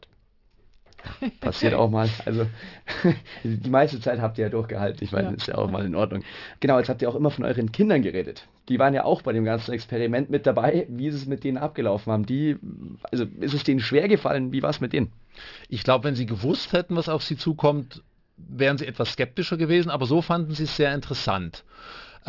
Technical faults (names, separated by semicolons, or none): aliasing